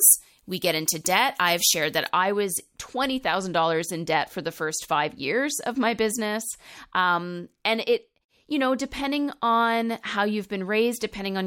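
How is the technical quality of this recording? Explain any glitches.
The opening is off: for the first 2.09 seconds, right up to "I was", there's pre-emphasis left on. The treble boost fits a 75 µs FM curve that never got its matching de-emphasis, so 10 kHz sits about 14 dB hot, and the speech comes across thin, glassy and hissy on sibilants.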